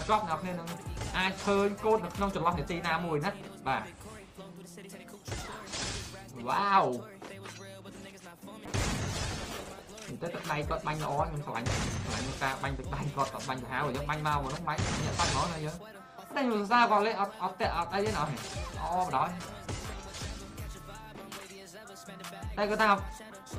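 From 8.66 to 12.63 s the sound turns rough and muffled, highs gone. A call bitrate drop is the cause, fitting a fall from 48 to 15 kbps.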